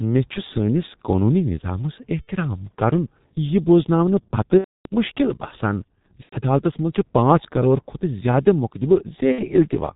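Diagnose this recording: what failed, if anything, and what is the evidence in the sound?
The codec stage failed: the speech went through a G.723.1 low-rate telephony codec, consistent with about 6 kbit/s, and the damage is heavy. The whole clip sounds muffled and hoarse, with nothing above 4 kHz and smeared consonants from its slow-updating voice model.

At the network stage, VoIP packet loss was concealed by the speech codec at 2.22–2.31 s, 4.58–4.88 s, 6.23–6.36 s and 9.32–9.45 s. For roughly 60, 270, 90 and 60 ms, the decoder replays its last pitch and filter with falling gain, giving a buzzy tone or coloured noise that fades. The longest gap fits about nine 30 ms frames.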